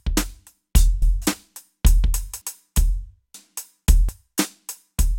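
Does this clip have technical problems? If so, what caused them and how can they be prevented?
Yes: the music skips ahead at 1.02, 2.42, 3.34 and 4.09 s, likely dropped buffers (overrun). Each loses roughly 0.1 s, about 0.3 s at 2.42 s. Larger capture buffers or higher recording-thread priority prevent this.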